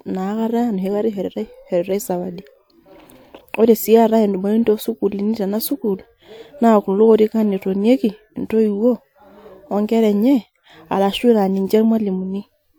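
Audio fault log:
No faults are heard in this speech recording. Nothing in the audio calls for an entry in this log.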